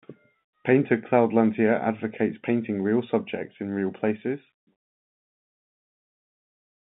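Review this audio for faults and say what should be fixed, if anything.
No faults; nothing to fix.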